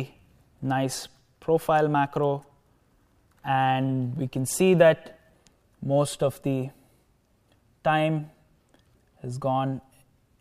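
Nothing here calls for a comment, since there's no technical fault anywhere in the audio.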